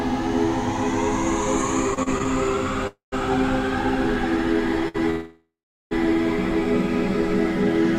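From 1.91 to 2.27 s, repeated stalls (stutter) occur as the jitter buffer runs dry five times, with gaps of up to 35 ms. The sound drags, and on a spectrogram it shows as short, smeared, repeated slices.

At 2.87 to 3.14 s a call audio freeze holds the last sound as a fading buzz, ending in about 130 ms of silence. The cause is likely packets delayed in transit. A second freeze, from 5.10 to 5.93 s, sustains a fading tone that ends in roughly 390 ms of silence. In the waveform, each freeze looks like a decaying tail followed by a flat line.

Between these, at 4.88 to 4.96 s, a short stall from a late packet stretches the sound for 60 ms, heard as a held, slightly buzzy moment and seen as horizontally smeared harmonics.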